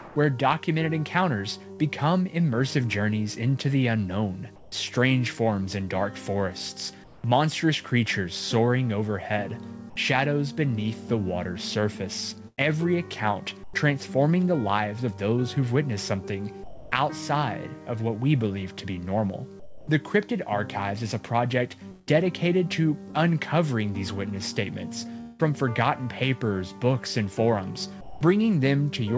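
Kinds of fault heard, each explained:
Comfort noise in place of the background: Over the first 7.2 seconds, the pauses lose their natural background, about 585 ms in all, and a steady, featureless hiss stands in, likely synthetic noise generated at the receiving end while the sender stopped transmitting. Unlike a dropout or muting, the gaps never fall to silence, and unlike a real room tone the fill has no texture or movement, only a flat, even wash.
Burst of packet loss: From 1.72 to 1.83 s the audio breaks. The last sound is stretched for about 66 ms, holding and fading rather than cutting, and then the stream picks up about 60 ms further on, with that stretch gone. Because the sound is continued before it resumes, this is heard as a smeared hold and a small jump, not a click or a blank gap.
Sound chopped by the voice detector: Between 12.48 and 28.21 s the sound is repeatedly clipped at its quieter edges and softer moments, with about 1.3 seconds in total likely replaced by comfort noise as the sender's voice detector switched transmission on and off. 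The fill is noise shaped like the background rather than a held sound, unlike packet loss, where the last sound is held and then dies away.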